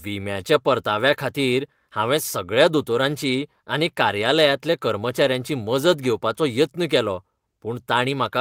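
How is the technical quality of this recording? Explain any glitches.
No glitches can be heard anywhere in this speech recording. There is nothing in it that needs a technical explanation.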